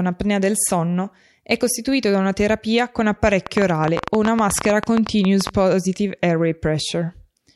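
From about 3.47 s to 5.50 s there's a train of clicks riding on top of the speech, around 30 of them at roughly 11.8 per second, and the spacing wanders rather than keeping a steady tick. They're all much the same sharp pop, peaking something like 15 dB above the speech, so they cut right through and stay audible in the gaps too. Repeated identical pulses like that most likely come from electrical interference nearby or a faulty connection or power supply.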